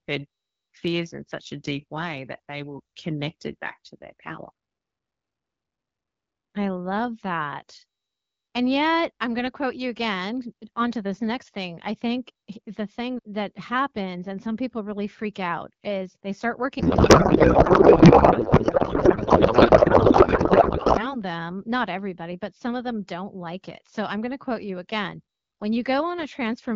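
A speech clip carried over AMR wideband, at a rate consistent with 12.65 kbit/s. Right after "out is they start", at 16.79 s, a codec payload misread begins. The speech turns into garbled noise and warble that barely follows it. It clears at 21.17 s, just before "them not everybody but". The cause is a packing mismatch. Octet-aligned AMR frames are being decoded as bandwidth-efficient ones, so the decoder finds the fields in the wrong places.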